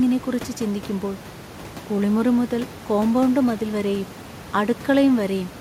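A speech recording with nothing technically wrong in it. Room noise from the recording space sits in the background, about 18 dB and about 23 dB below the speech, and belongs to the recording itself rather than to the system.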